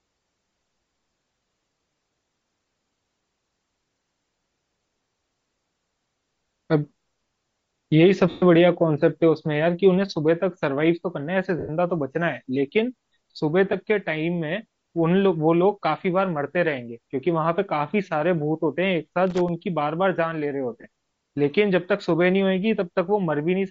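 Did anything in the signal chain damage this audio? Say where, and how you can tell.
Yes. At the codec stage, the speech carries a breathy, grainy edge throughout, likely from low-bitrate Bluetooth LC3 compression (around 32 kbps), which discards upper-spectrum detail and fills it with noise.

On the wireless link, lost LE Audio frames cause brief noisy smears at 8.30–8.43 s (120 ms), 11.59–11.70 s (100 ms) and 20.81–20.84 s (30 ms). The decoder repeats the last spectrum with scrambled phase.

In the analogue wiring, loose connector crackle appears at 19.27–19.49 s. An intermittent contact chops the signal into an irregular burst of scratchy crackle.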